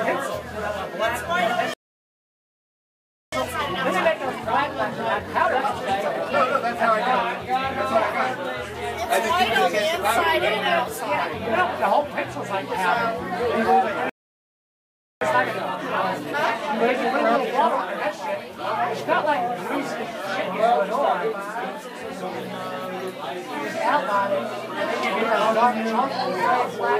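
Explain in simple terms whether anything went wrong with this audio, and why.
Two things went wrong, and they come in pairs. First, a playback stall: the sound cuts out from 1.74 to 3.32 s, about 1.6 seconds, then again from 14.09 to 15.21 s, about 1.1 seconds. The likely cause is the player running short of data or getting held up.

Right after each gap comes time-compressed catch-up. The player trims its backlog by snipping out tiny pieces and blending the joins, so the audio rushes along at normal pitch. That runs 1.25 times fast from 3.32 to 6.32 s, then 1.1 times fast from 15.21 to 18.21 s.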